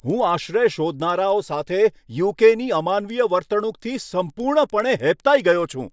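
Resampler restarted on every block, throughout: each 100 ms block is converted alone, leaving edge errors heard as ticks ten times a second under the speech.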